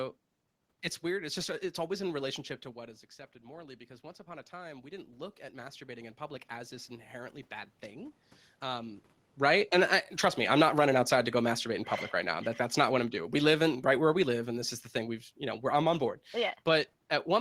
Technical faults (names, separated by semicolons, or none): automatic gain rising; automatic gain falling